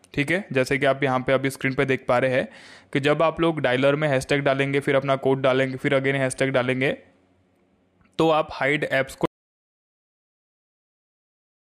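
At 9.26 s the sound stops mid-flow and never returns: the final 2.5 s, running to the end of the clip, are silent with no room tone or hiss beneath them. This is an audio dropout to silence, likely caused by the input being lost through a disconnected device, a broken link or an accidental mute while the recorder kept writing silence, so whatever followed that moment is gone.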